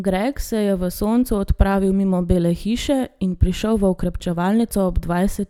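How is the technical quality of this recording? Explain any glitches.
Nothing stood out on listening to the recording, and there are no glitches to explain.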